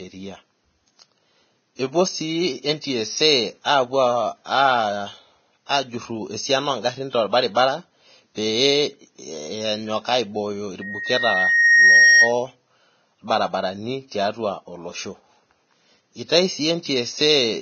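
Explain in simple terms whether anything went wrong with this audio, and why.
The whole recording sounds hissy and grainy, with the crisp top end missing entirely above 6.6 kHz and sharp sounds blurred. This heavy damage is likely Vorbis compression squeezed to a low quality setting, which trims the treble and replaces fine detail with noise.

Two brief pre-echo smears occur, one at 7.32 s and one from 7.55 to 7.57 s: a short hiss arrives just before a sudden sound, softening its start. The codec spreads its noise across a whole chunk of audio, so the quiet moment before the attack gets filled too.

From 10.81 to 12.33 s a loudspeaker feedback squeal appears: a single 1.9 kHz tone swells over about a second and a half until it is louder than the speech. A microphone picked up the speaker it was feeding, and that one pitch kept amplifying itself.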